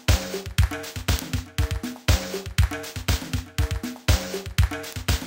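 This everyday-sound recording carries word clock ticks from 0.12 s to 5.19 s: about twenty sharp clicks roughly every 0.3 s, where an unlocked receiving clock, off by something like 70 ppm, drops or repeats one sample. On a spectrogram they form evenly spaced thin vertical broadband lines; the waveform shows isolated one-sample glitches.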